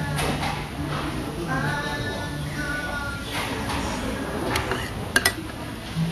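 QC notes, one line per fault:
Throughout: Vorbis compression. The treble is plainly hissy and grainy, tones are roughened and attacks blurred, likely from low-bitrate Vorbis coding near 35 kbps. A spectrogram shows a hard ceiling at 14.1 kHz, with patchy, noise-like energy just below it.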